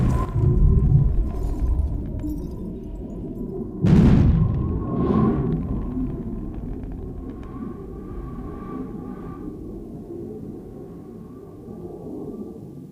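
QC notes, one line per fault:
No faults found: level, continuity and timing hold steady across the clip with nothing to flag.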